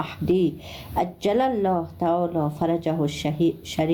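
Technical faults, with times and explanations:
Throughout, gain pumping: the level is pulled down each time a loud sound arrives, a swing of roughly 20 dB, so loud and soft passages end up squashed close together. The likely cause is input gain set far too high, with a fast limiter or compressor clamping down on each peak. Unlike a noise gate, the background never cuts to silence.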